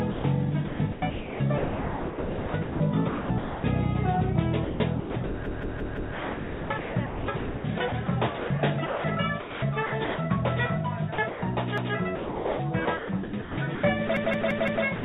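Sound chopped by the voice detector is heard from 0.12 to 3.64 s, 4.64 to 10.18 s, 11.14 to 11.42 s, and from 12.15 s to the end. Quiet stretches drop out and are filled with synthetic noise, likely comfort noise inserted by a voice detector gating the transmission. On a spectrogram those gaps show as flat, featureless noise patches. A repeated buffer produces stutters at 5.46 to 6.14 s and 14.17 to 14.85 s, where a roughly 171 ms piece plays four extra times, and at 11.78 to 11.95 s, where it plays once more. The chunk length fits an 8192-sample buffer replayed when fresh audio arrived late, and the waveform shows identical blocks with hard vertical seams at each join. The call path, which sounds like G.711 mu-law, leaves nothing above 4 kHz.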